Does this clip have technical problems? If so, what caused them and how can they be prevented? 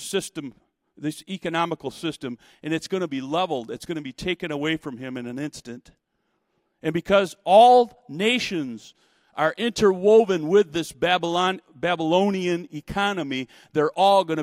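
No, nothing stood out as a technical problem on listening to this speech clip.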